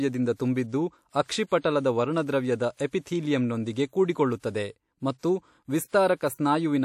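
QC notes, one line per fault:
6.35 to 6.39 s, pre-echo: right before a sharp onset near the end of the speech there's about 41 ms of short hiss that shouldn't be there, and the attack itself comes across soft and smeared. That's the codec spreading its quantisation noise across a whole transform block. The loud onset landed late in the block, so noise scaled for that burst also spills into the quiet stretch just ahead of it.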